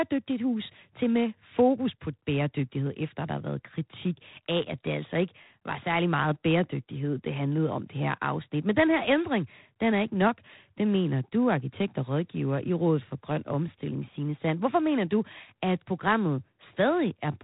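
Speech is cut off at 3.9 kHz throughout, with a harsh, rasping hiss rising and falling with level: plainly audible G.726 ADPCM damage that fits the 24 kbit/s mode.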